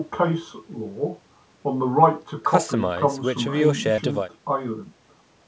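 At 3.96 to 3.99 s, a short concealed packet loss: about 20 ms never arrived, and the decoder extended the preceding sound, heard as a brief smeared wobble rather than a silent click-out.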